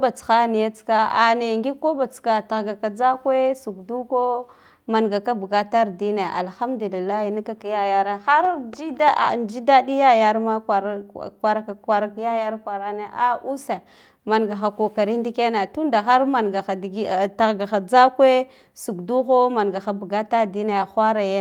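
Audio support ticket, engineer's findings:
No faults found on listening; speech audio checked across the full clip with nothing to attribute to any component.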